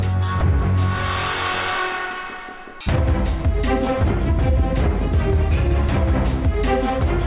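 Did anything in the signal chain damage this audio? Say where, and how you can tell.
No, nothing in the chain audibly damaged this audio, and there's no point in it where any stage gives itself away.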